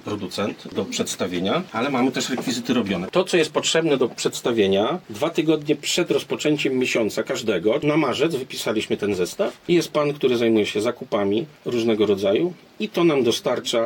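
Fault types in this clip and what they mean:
CD scratch ticks: A mark on the disc wipes out more data than the error correction can rebuild, and the damage comes round once per revolution, so the player patches or mutes those samples each time. Here you get five short ticks between about 8.95 and 9.71 s, roughly six per second, which fits the disc's rotation. Each one is very brief, the longest only a millisecond or two, so they sound like clicks of uneven strength.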